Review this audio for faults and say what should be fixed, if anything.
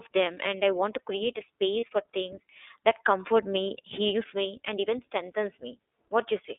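The whole recording carries iLBC codec damage, plainly audible as a rough, slightly synthetic edge. Audio is confined to roughly 300 Hz to 3.6 kHz, with nothing above 4 kHz. Unlike wideband codec smearing, this is narrowband coding of each frame on its own, consistent with iLBC's 13.33 kbps mode and 30 ms frames. Sending the call through a wideband codec such as Opus would avoid this.

A brief lost iLBC frame occurs from 1.80 to 1.83 s, between "create a" and "for things that comfort". For those 30 ms the decoder repeats the last pitch cycle mixed with noise, giving a short buzzy, held vowel. Unlike a dropout or click, the gap is filled with sound rather than silence, and the voice recovers at once because iLBC frames decode independently. A jitter buffer with forward error correction or redundant packets on the network path would prevent this.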